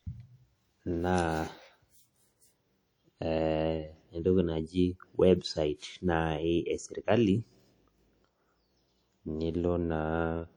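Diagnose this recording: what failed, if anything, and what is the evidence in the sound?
The codec stage failed throughout this speech clip. Every syllable carries a ringing, washy smear and a hiss that swells and fades with the signal. Content reaches about 20.1 kHz. The likely cause is WMA compression, with block quantisation noise consistent with a low-bitrate stream near 48 kbps.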